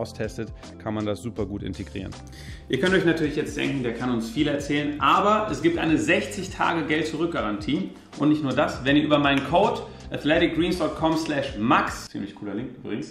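No technical faults are audible.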